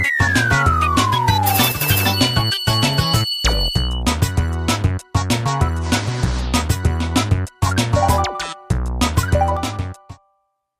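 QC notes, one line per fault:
1.72–1.81 s and 9.57 s to the end, sudden gain jump: the level drops by about 8 dB for a brief 0.09 s stretch, then by about 6 dB from 9.57 s onward, with sound and noise floor falling together at once. The likely cause is a digital gain change applied from one sample to the next with no ramp. On the waveform the envelope steps down abruptly, and the spectrogram dims evenly across all frequencies at those exact instants.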